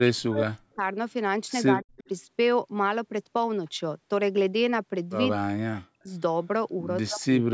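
The speech drops out hard at 0.03 to 0.82 s, 1.68 to 1.99 s, 5.33 to 6.1 s and from 7.05 s to the end. It dips by as much as about 40 dB. That's likely speech suppressed in double talk: the echo canceller couldn't tell this talker from the far side's echo and turned everything down.

Right after the second dip, from 1.99 to 2.08 s, a faint repeat of the voice shows up, delayed by 180 ms and sitting about 25 dB under the speech. That points to an echo leak, with a loudspeaker on one end bleeding through what its canceller failed to remove.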